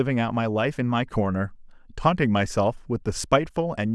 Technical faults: none

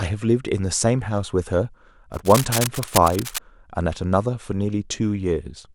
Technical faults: cable scratch noise

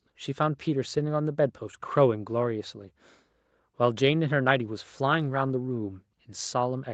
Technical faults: none

